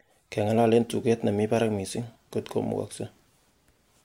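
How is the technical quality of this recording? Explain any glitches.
No audible technical faults.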